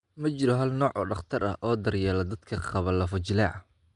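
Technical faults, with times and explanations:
Throughout, likely Nellymoser compression: weak bands receive no bits and are filled with noise, leaving the speech hissy, smeared and underwater, with nothing above 10.6 kHz.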